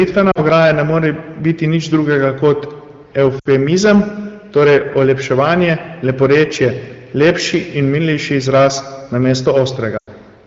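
Hard clipping runs through the whole speech clip from the start. The signal is driven about 10 dB past what the chain can pass, so a few percent of samples have their peaks sliced flat. Those squared-off tops add harmonics high in the spectrum, heard as a harsh, gritty fuzz riding on every loud syllable rather than as occasional crackle. It sits on top of wideband coding that is clear in its own right, which fits a rate near 16 kbit/s.

Lost AMR speech frames come next, at 0.31 to 0.39 s, then 3.40 to 3.48 s, then 9.97 to 10.09 s. Each time, corrupted frames failed their check and the decoder carried the last good pitch and vocal tract settings forward at falling gain. The first gap lasts 40 ms, which fits two frames, and drops to near silence. The second, 60 ms, drops to near silence. The last, 100 ms, fades quickly to near silence before the sound returns briefly weak or rough.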